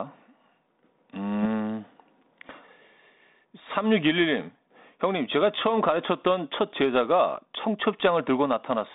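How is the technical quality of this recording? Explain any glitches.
No glitches can be heard.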